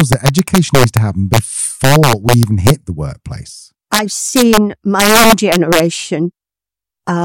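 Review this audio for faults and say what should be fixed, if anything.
Integer overflow hits the speech at 0.00–0.97, 1.34–1.38, 1.84–2.70 (ending just before "the workplace"), 3.94–3.99 (just after "the workplace"), 4.36–4.57 and 5.00–5.80 s. Loud peaks driven about 2 to 6 dB past the integer limit wrap to the opposite sign, producing violent cracks harsher than clipping. Saturate gains and sums to the maximum value instead of letting them wrap.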